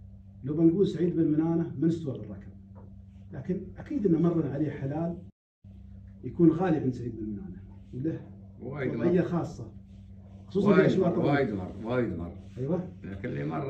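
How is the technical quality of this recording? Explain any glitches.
The recording has one clear glitch: a playback stall. From 5.30 s to 5.65 s the output drops to silence for about 342 ms, cutting the sound off in mid-flow before it resumes. The likely cause is the player running short of buffered data, or its audio thread being blocked, so nothing reached the output until it recovered. It is heard as an abrupt gap of roughly a third of a second, a hard stop followed by a sudden restart.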